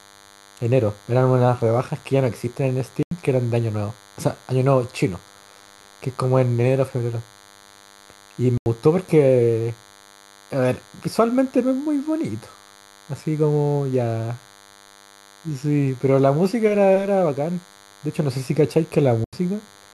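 Right from the start and running the whole way through, there's a DECT cordless phone buzz sitting under the speech: a thin, steady buzz at 100 Hz with plenty of harmonics, about 30 dB below the talking. Something nearby, a DECT handset or base, is firing a radio burst every 10 ms, and the audio circuitry is rectifying those bursts into the signal. It's quiet but constant.

Then there are three dropouts where a corrupt frame was muted: 3.03 to 3.11 s, 8.57 to 8.66 s, and 19.24 to 19.33 s. Each is a hole of just under 90 ms that cuts in abruptly, which points to two consecutive compressed frames being damaged, rejected by the decoder, and replaced with silence. Timing stays intact, so the speech picks up right where it should after each gap.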